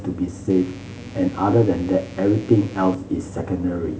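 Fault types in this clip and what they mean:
Mains buzz: a steady, raspy buzz sits under the speech from 0.50 to 2.95 s, roughly 25 dB below it. Sharp switching spikes from a dimmer, rectifier or unshielded lead enter twice per 60 Hz cycle, spraying harmonics up into the kilohertz range.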